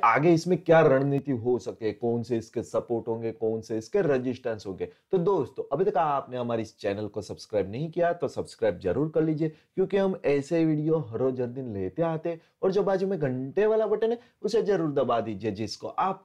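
At 1.18 s the level drops abruptly by about 6 dB and stays down to the end. One channel drops out, likely lost from the stereo pair before mono summing.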